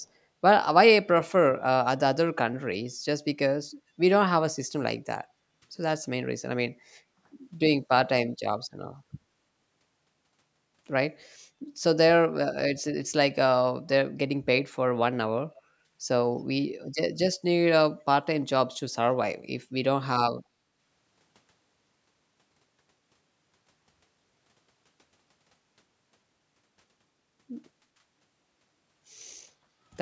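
A speech recording, band-limited by call microphone processing with nothing above 8 kHz. From 15.55 to 15.62 s a faint delayed copy of the speech surfaces, lagging by 316 ms and roughly 30 dB below the direct speech. This is an echo leak, likely from a far-end loudspeaker whose echo canceller let some residual signal pass back down the line. The room background is also gated by the echo canceller, dipping by about 13 dB from 15.72 to 15.89 s and by about 16 dB from 20.52 to 20.67 s. Each dip lasts a fraction of a second and recovers once the canceller releases its microphone suppression.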